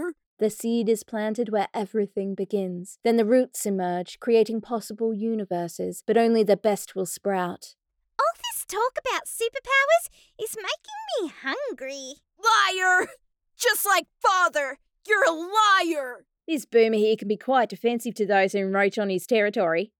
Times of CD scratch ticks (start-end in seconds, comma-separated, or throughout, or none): none